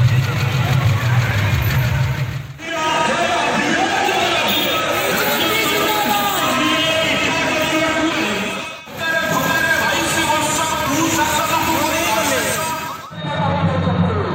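A doubled audio track runs through the whole clip: a second, full-band copy of the sound trails the original by roughly 150 ms, sitting a few decibels below it. The most likely cause is the same signal reaching the mix twice, once directly and once through a slower path. Because the copy carries no decay or room colour, it reads as a dry, slapback-like repeat. Every onset gets smeared into a double attack.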